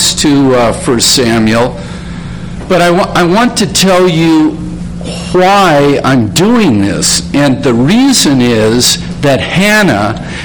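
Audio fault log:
Throughout, hard clipping: driven about 17 dB past full scale, roughly a fifth of samples are cut flat, producing harsh fuzz on every loud sound.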